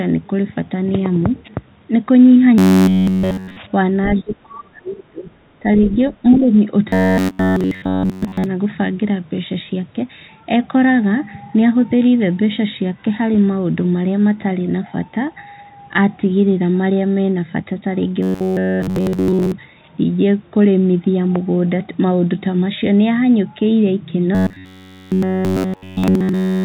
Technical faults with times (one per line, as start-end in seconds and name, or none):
2.58-3.56 robotic sound from repeated short buffers
4.07-5.29 speech suppressed in double talk
4.14-4.22 other side's voice leaking through
5.60-6.52 speech suppressed in double talk
5.84-5.96 other side's voice leaking through
6.89-8.46 robotic sound from repeated short buffers
18.23-19.52 robotic sound from repeated short buffers
24.35-26.64 robotic sound from repeated short buffers